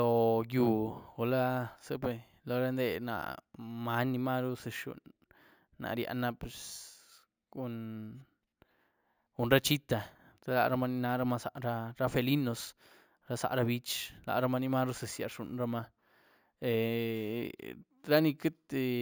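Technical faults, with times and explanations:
Throughout, imaging from sample-and-hold upsampling: there's a bright metallic fizz riding on the speech, roughly 20 dB under it, with a mirrored copy sitting around 8 to 16 kHz. That fits 16 kHz audio raised to 48 kHz by repeating samples without a smoothing filter.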